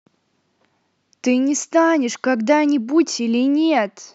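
No technical faults can be heard anywhere in the recording. The speech runs without any break, glitch or sudden change in the sound.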